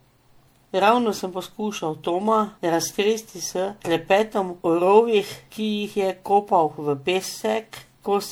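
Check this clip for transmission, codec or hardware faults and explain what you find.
One fault runs through the whole clip: generation loss. The speech has likely been through a lossy MP3 encode-decode cycle around seven times, with the character of each pass pointing to roughly 96 kbit/s. Each re-encode quantises on a shifted frame grid, so the noise and the gaps carved into the spectrum pile up. The result sounds swirly and hollow, smeared beyond what that bitrate alone would give, and consonant onsets lose their crispness.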